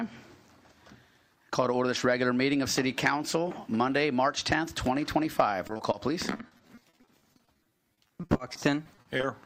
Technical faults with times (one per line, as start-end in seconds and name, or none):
5.67-5.95 repeated packet loss (robotic sound)
6.37-9.25 repeated packet loss (robotic sound)